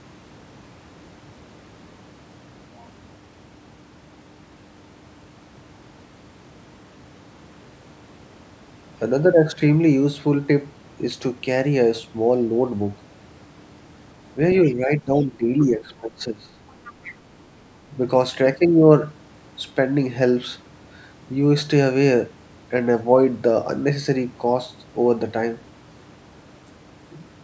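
From 14.64 to 16.55 s the talker's level sinks and breaks up, dropping by roughly 15 dB at its deepest, with about a second and a half of the stretch held down in pieces. This is speech suppressed in double talk. Both ends were likely speaking together, and the echo canceller, unable to tell the local talker from the loudspeaker echo, turned the microphone signal down.

Within that dip, the other side's voice leaks through in two brief scraps, at 14.67 to 14.74 s, about 25 dB below the talker, and at 15.17 to 15.26 s, fainter at about 35 dB down. A longer, clearer stretch follows from 16.68 to 17.14 s, about 20 dB under the talker. The far-end sound was likely played on the device's loudspeaker and picked up by its microphone, with the echo canceller failing to remove all of it.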